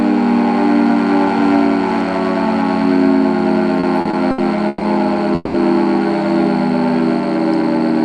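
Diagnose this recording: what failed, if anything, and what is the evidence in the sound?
Between 3.80 and 4.84 s there are repeated stalls (stutter) at the network and jitter-buffer stage. The sound hitches five times, with the longest hold about 130 ms, and these held stretches fill roughly 290 ms, over a quarter of that span. Each hold repeats the last sound instead of leaving a hole, and the audio then resumes without skipping ahead. Packets were arriving late over and over. Unlike packet loss, nothing is missing.

At 5.35 to 5.57 s there is a single call audio freeze, most likely a late burst of packets that briefly emptied the jitter buffer. The last sound is stretched into a fading buzz or hiss for about 190 ms, with a brief near-silent moment of about 10 ms, and then the audio picks up where it stopped, now about 190 ms later than before. This is one longer hold, not a string of short hitches, and no content is dropped.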